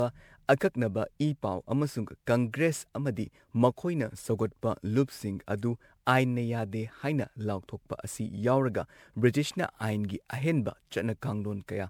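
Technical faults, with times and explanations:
throughout, generation loss: the speech sounds swirly, smeared and hollow, with blurred attacks, worse than one encode would leave. It points to 128 kbit/s MP3 likely re-encoded about seven times, each pass requantising on a shifted frame grid, stacking noise and spectral holes.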